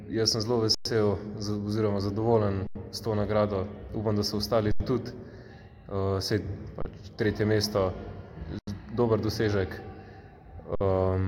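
The sound freezes flat six times, at 0.75–0.85 s, 2.67–2.75 s, 4.72–4.80 s, 6.82–6.85 s, 8.59–8.67 s and 10.75–10.81 s, then resumes where it stopped with only a soft edge and nothing missing. These are underruns with held sample. The output buffer ran dry, and the converter held its last value until data returned. The three 85 ms gaps fit a 4096-sample buffer, and the others last 109, 31 and 55 ms.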